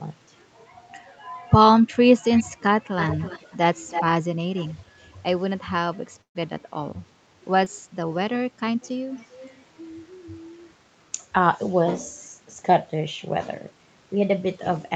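From 2.22 to 4.81 s, in stretches at 2.22–2.43, 2.98–3.57, 3.90–4.04 and 4.56–4.81 s, a delayed copy of the speech trails it by about 329 ms. This is an echo leak, likely from a loudspeaker whose echo canceller let part of the far-end speech back into its microphone. It sits about 15 dB below the speech, rising to about 5 dB below at 3.90 s and dropping to about 25 dB below at 4.56 s. Its fixed lag sets it apart from room reverberation. It returns more weakly at 8.82–8.88 and 9.15–9.62 s.

At 6.21–6.37 s a burst of packet loss leaves about 140 ms missing. The receiver extends the last sound and fades it before the speech resumes further on, so the gap holds only a brief dying tail and then about 120 ms of silence.

At 7.65–7.68 s, short concealed packet loss covers a 14 ms hole with synthesized continuation, with about 20 ms of audio missing. It is heard as a brief smear, too short to fade the way the burst does.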